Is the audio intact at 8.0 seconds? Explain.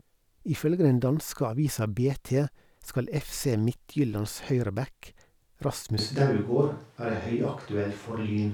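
No. At 8.0 seconds the clip is inside a switch to a distant microphone, which begins abruptly at 5.99 s and runs to the end. From that point the speech turns roomy and hollow, with thinner bass and a background noise floor roughly 35 dB below the speech, while the overall level stays about the same. The likely cause is that the close microphone's feed dropped out and a pickup farther from the talker took over.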